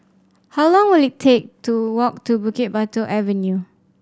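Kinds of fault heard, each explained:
No technical faults can be heard in this speech recording. There is nothing here to list or explain.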